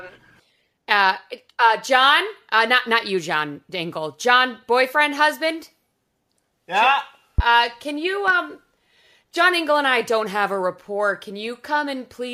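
Speech clip with two loud pops, at 7.38–7.42 s and 8.28–8.32 s, the first far stronger above the speech than the second. Each is likely a voltage pulse from a plug, switch or static, showing as a sharp waveform spike and a thin full-height spectrogram stripe.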